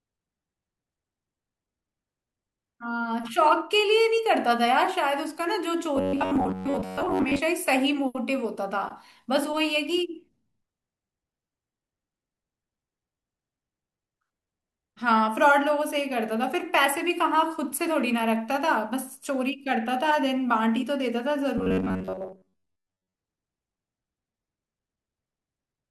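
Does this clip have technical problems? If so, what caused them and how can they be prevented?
Yes. Robotic sound from repeated short buffers occurs from 5.96 to 7.40 s and from 21.58 to 23.14 s. The speech becomes a rigid, metallic buzz at about 94 Hz. This is likely caused by audio arriving too slowly, so the software loops a segment of about 10.7 ms and skips most of the real signal. Prevent it by giving the audio thread higher priority or using larger buffers, so new audio always arrives on time.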